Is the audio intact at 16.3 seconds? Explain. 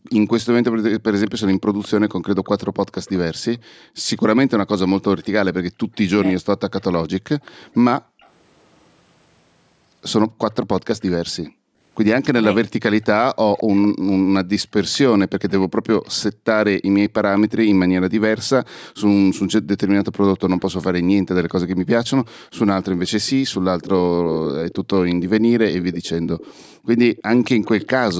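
No. From 16.32 to 16.45 s the echo canceller, hearing the far-end loudspeaker, clamped the microphone down hard, so the background gated by the echo canceller plunges by about 40 dB and drops out for roughly 150 ms before the room sound returns. Across that same moment, part of the loudspeaker's output likely slipped past the canceller and was sent back. This echo leak runs from 6.8 to 28.14 s and leaves a delayed copy of the speech trailing 217 ms behind, about 20 dB below it.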